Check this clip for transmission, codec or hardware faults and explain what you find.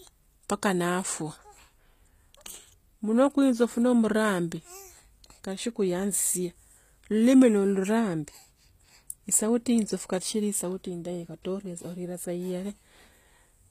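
One codec fault runs through the entire speech clip: HE-AAC compression is the likely cause, plainly audible and consistent with a low bitrate near 24 kbps. Spectral band replication rebuilds the treble by copying lower bands upward, so s sounds come out gritty and metallic. A spectrogram would show smeared, repeated upper bands with nothing above 15.5 kHz.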